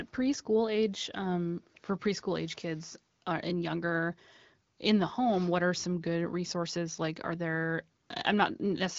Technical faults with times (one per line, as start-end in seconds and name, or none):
none